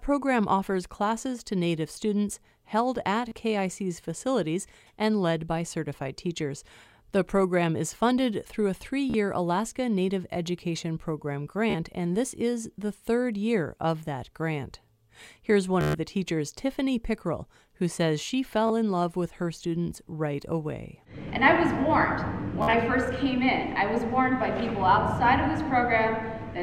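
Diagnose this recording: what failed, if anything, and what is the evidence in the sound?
The failure is in the wireless link: a Bluetooth stutter, with packets lost or arriving late. The receiver replays its last short buffer, giving a brief buzzing repeat at 3.29–3.32, 9.10–9.14, 11.70–11.75, 15.81–15.95, 18.67–18.70 and 22.62–22.73 s. About 27 to 133 ms goes missing each time. The last event is broken into separate runs, the longest about 53 ms. After each stutter the sound resumes further on, as if it had kept playing.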